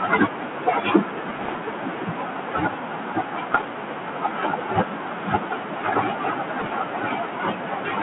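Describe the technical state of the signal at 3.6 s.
Bit errors on the ADPCM link, from 3.54 to 3.69 s, flip a small fraction of a percent of bits. Each error throws the decoder's step size and predictor off track, so it rings on as pops and rough, level-jumping bursts. The noise suppressor is also cutting speech here and throughout the clip, mistaking some of the speech for noise and pulling it down by up to about 13 dB, so softer parts sound swallowed and faint.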